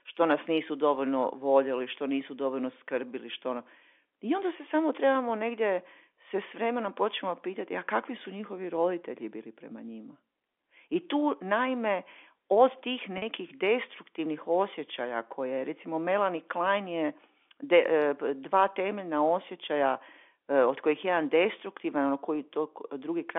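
At 13.18 s the speech briefly catches for about 40 ms, until 13.22 s. This is packet loss with pitch repetition. Audio packets went missing, and the receiver covered the gap by repeating the last pitch period it had. The gap's length fits two lost 20 ms packets. Because the gap is short, the repeat never fades to silence. It sounds like a slightly held, buzzy note, heard within the narrow 300 to 3500 Hz telephone band of the G.711 coding.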